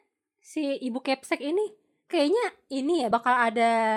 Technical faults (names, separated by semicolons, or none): compressed frames skipped